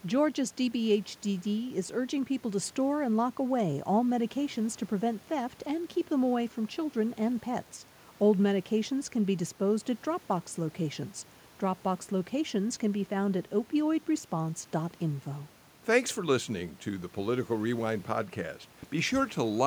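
No technical faults can be heard anywhere in this recording.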